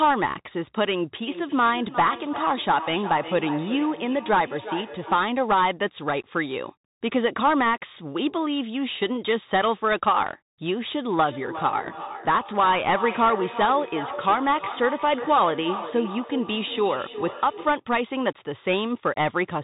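From start to finish the speech sounds boxed-in and scratchy, with a grainy hiss underneath and nothing above 3.8 kHz. That is the Bluetooth CVSD headset codec: one-bit up-or-down coding, which fits a 64 kbps stream, can't track fast high sounds.

From 1.27 to 5.38 s, and again from 11.23 to 17.85 s, each phrase comes back thinner and ringing, around 400 ms later, at about 12 and 11 dB below the speech. This is feedback echo between two devices: one device replays what another's microphone sent, and that microphone picks it up again.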